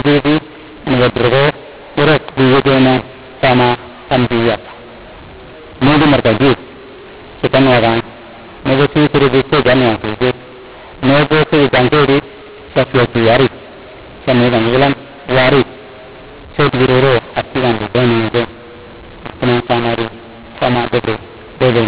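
Telephone speech, band-limited at 4 kHz by its G.711 coding, suffers throughout from mu-law and A-law mixed up: audio written as mu-law is read back as A-law, scrambling levels. Unlike ordinary G.711 quantisation noise, which sits under the signal and follows it, here pauses fill with noise and the speech turns harsh.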